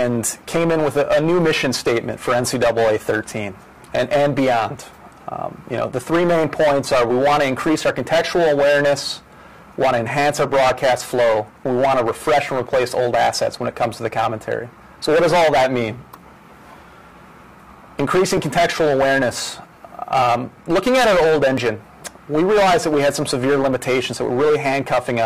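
At 18.37 s and 21.58 s, a repeated buffer: a 1.45 ms slice, fitting a 64-sample buffer, plays twice, producing a tiny click rather than a dropout's silent gap.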